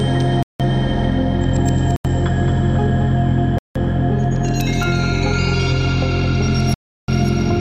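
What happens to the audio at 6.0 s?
At 6.0 s every sound is followed by a slapback copy of itself about a fifth of a second later, only a few decibels quieter. The repeat is full-band and dry, with no decaying tail or room colour, and it runs from start to end rather than just at that moment. This is a doubled audio track. It is likely caused by the signal being captured a second time through a slower path, which mixes in a lagging duplicate.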